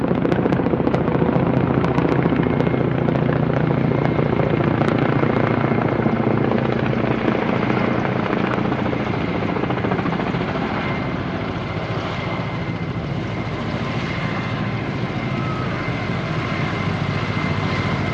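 No technical faults are audible.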